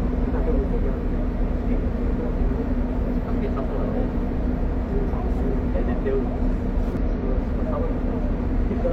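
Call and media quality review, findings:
Damaged data in compressed stream: short glitches at 2.33–2.37 s, 4.32–4.37 s, 6.97–7.02 s, each about 50 ms. Decoder misreads corrupted frames, loses sync, resyncs at next header. Spectrogram: brief broadband vertical smears; waveform: abrupt discontinuities.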